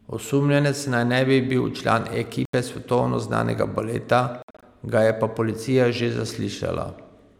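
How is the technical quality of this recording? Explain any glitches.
The speech has two brief gaps where the sound cuts out and picks up later. These are Bluetooth dropouts. Audio packets likely arrived late and were discarded, so the output went silent. At 2.45 to 2.54 s, after "ne bi bil član", about 81 ms vanishes in one clean hole. At 4.42 to 4.63 s, after "svetovno znanega baleta", several short holes are scattered over about 0.2 s. They total about 142 ms, and the longest lasts 61 ms. Each time the speech resumes as if it had kept playing.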